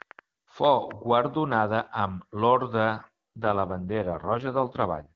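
From 0.02 to 1.53 s a train of clicks ticks over the speech at about 3.3 per second, irregularly spaced, roughly seven in all and peaking about 10 dB above the signal. Likely external interference or a faulty connection or power supply. The waveform shows thin, near-identical spikes, and the spectrogram shows matching full-height vertical lines.

From 3.36 to 5.13 s an AMR rate drop makes the AMR-WB speech rougher and more synthetic, consistent with a fall from about 23.85 to 6.6 kbit/s. The band stays the same with no gap, but the spectrogram's harmonics smear into noisier texture.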